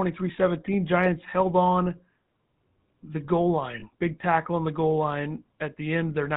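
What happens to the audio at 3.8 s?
Lost GSM frames hit between 3.80 and 3.84 s, after "the goal" and just before "big tackle on the". The decoder had no valid data for a moment and replayed the parameters of the last good frame, which fits a single lost 20 ms frame. The result is a brief rough, metallic ring in place of the missing sound, over before any fade to silence.

The GSM full-rate codec is active here too, as throughout the clip, running at 13 kbps. It rebuilds the sound from a vocal-tract model driven by regularly spaced pulses and keeps only every third excitation sample, and nothing above 4 kHz survives. This gives a plainly audible buzzy, gravelly roughness around the dropout.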